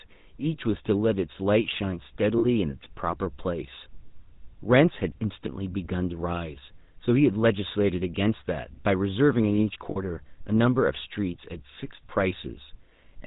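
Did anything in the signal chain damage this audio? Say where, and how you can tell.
Yes. At the codec stage, the GSM full-rate codec adds buzzy, gravelly roughness throughout and removes everything above 4 kHz, unlike clean band-limiting.

At the network stage, lost GSM frames at 2.38 to 2.46 s and 9.90 to 9.98 s ring metallically instead of falling silent like plain dropouts.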